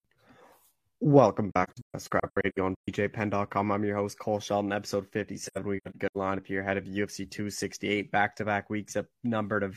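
From 1.52 to 2.88 s and 5.47 to 6.17 s, the speech falls into scattered silent gaps, about 0.68 s and 0.3 s in total. The longest are roughly 150 and 100 ms. This is AAC frame loss with muting: the decoder zeroed the missing frames, and the overlapping windows fade each hole out and back in. The soft edges and clean silence, with no repeated sound, separate it from hard dropouts and from concealment that repeats audio.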